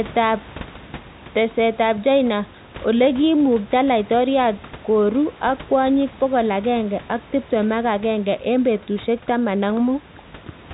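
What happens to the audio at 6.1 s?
Nothing goes wrong at 6.1 s: the speech continues intact, passing through the narrowband G.711 telephone coding with the room's own background noise sitting about 21 dB beneath it.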